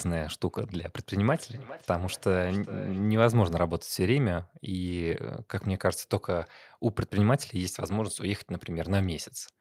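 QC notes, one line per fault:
1.28–3.24 s, feedback echo between two devices: the speech comes back as a faint, delayed copy roughly every 0.4 s, peaking about 16 dB below the direct speech and trailing each phrase at that steady spacing. A second device in the same room is on the call and plays this speaker's audio aloud, and the microphone catches that playback and sends it round again. Each device's echo canceller only removes its own output, so the loop goes uncancelled.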